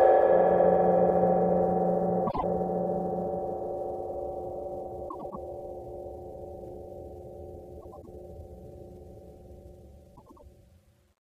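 At 2.27 to 2.44 s, and again at 5.09 to 5.36 s, 7.81 to 8.08 s and 10.16 to 10.43 s, the sound shows frames out of order. Two adjacent blocks were decoded in swapped sequence, so each stretch plays its halves exchanged. The blocks are 52.2 ms in the first case and 104.5 ms in the others, which fits runs of two and four frames. Each sounds like a brief garbled flutter, and no time is lost.

From 8.66 s to the end, sample clock jitter adds a roughness to the sound. The converter's clock wanders, so samples land slightly early or late, and the resulting error scales with how fast the waveform is changing. The timing scatter is on the order of 10 microseconds, putting the error roughly 25 dB below the signal. It is heard as a grainy hiss that rises on loud, bright passages and drops away in quiet ones.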